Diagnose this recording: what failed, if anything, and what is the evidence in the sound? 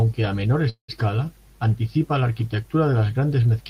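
From 0.69 to 0.90 s speech holds as a fading buzz, then silence, and resumes intact 190 ms late. This is a call audio freeze, likely from network packets delayed until the jitter buffer ran empty.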